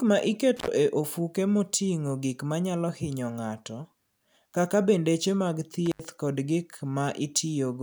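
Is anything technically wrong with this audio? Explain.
Yes, there is an intermittent contact fault, twice in this speech clip. A loose cable or plug briefly opened, for about 74 ms between 0.57 and 0.68 s, just before "e ofuko moting'o gik", and for about 79 ms between 5.86 and 6.05 s, after "kaka bendeche mag" and before "kod gik", so the sound drops out with crackle at each edge.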